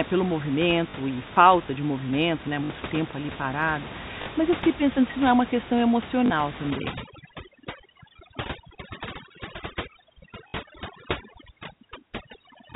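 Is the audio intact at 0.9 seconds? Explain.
No. Packet loss with last packet repeated, 0.90 to 0.94 s, just before "e falta de movimento": about 40 ms is lost, which fits two 20 ms packets. The last packet is replayed, so the sound briefly stutters with a robotic buzz.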